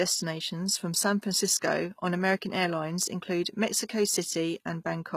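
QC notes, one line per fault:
throughout, HE-AAC compression: s sounds turn gritty and lispy as treble is rebuilt from copied lower bands, likely a low bitrate near 20 kbps; spectrogram shows repeated upper-band patterns, empty above 14.9 kHz.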